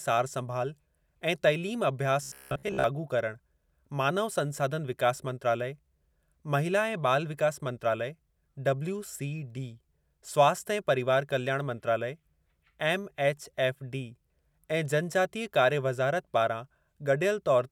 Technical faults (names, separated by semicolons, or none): robotic sound from repeated short buffers